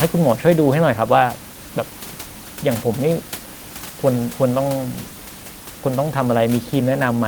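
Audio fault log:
Nothing to log here: the speech comes through with no faults, just the room's own background hush sitting about 16 dB beneath it.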